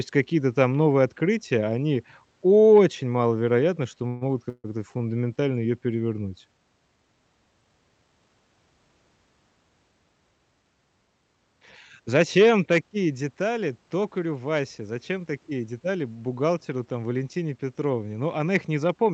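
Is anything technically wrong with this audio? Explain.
Yes, this speech recording has several network playback faults.

A call audio freeze occurs twice: at 4.07 to 4.23 s, right after "они очень маловероятно что", and at 4.49 to 4.66 s, after "очень маловероятно что могут". Packets were most likely held up in transit, so the jitter buffer ran dry. The receiver carried the last sound forward as a fading buzz or hiss for about 140 ms and about 150 ms. The second freeze trails into roughly 30 ms of silence. Nothing is lost, but gaps are inserted into the flow.

A short stall from a late packet follows at 4.98 to 5.02 s. One packet missed its slot, and the receiver stretched the preceding sound by about 16 ms until it arrived. The result is a briefly held sound with a slight buzz or dip, with no content missing.

A jitter buffer speed-up runs from 15.51 to 15.81 s, just before "бухгалтеру там". 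After a backlog built up, the receiver trimmed small pitch-period pieces repeatedly, around 50 ms in total. Playback rises to about 113% speed at unchanged pitch, which sounds briefly hurried.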